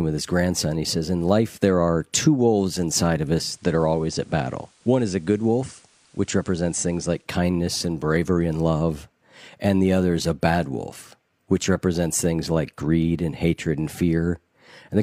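At 3.39 s, just after "two wolves inside of", the receiver lost its digital signal and cross-faded over 178 ms to the station's FM broadcast, returning to digital at 7.31 s before "kindness and bravery and". This is digital radio blending to analogue. During the FM stretch, faint hiss sits around 35 dB below the speech, and the level drops by about 2 dB.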